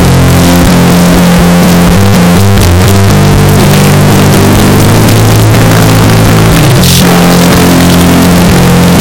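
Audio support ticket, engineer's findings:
Entire clip: near-square waveform at a high, near-constant level, extremely loud and harsh, noise floor as loud as the content, pitch still traceable. Likely float read as integer, 32-bit float samples decoded as 32-bit integers.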